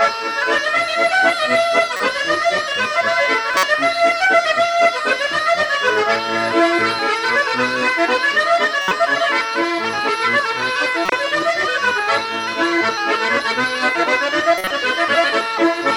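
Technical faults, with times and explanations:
1.97–2.00 s, 3.54–3.67 s, 8.82–8.92 s, 11.06–11.12 s, 14.58–14.71 s: corrupt frame decoded. Damaged frames got played anyway, so energy lands at wrong frequencies, giving short, loud chirpy noise bursts.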